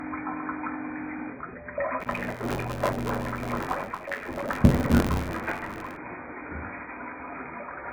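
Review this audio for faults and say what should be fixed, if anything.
Throughout the clip the sound is dull and smeared, with a warbling, fizzy texture. The likely cause is heavy AAC compression at a very low rate, consistent with AAC-LC near 12 kbps. Encode at a higher bitrate, or keep a lossless master.

From 2.00 s to 5.97 s a buffer tearing buzz runs at 93.8 Hz, which fits a 512-sample buffer. In each period, a small slice of about 20 ms old audio is spliced in with hard edges. Fix the writer-reader timing so the pointers never cross.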